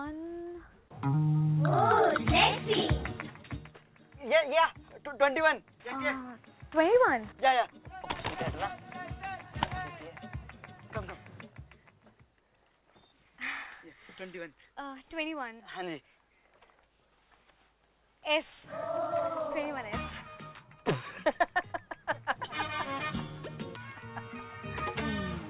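Nothing stood out on listening to this clip beyond the narrow, call-like bandwidth of a G.711 telephone path, with nothing above about 4 kHz.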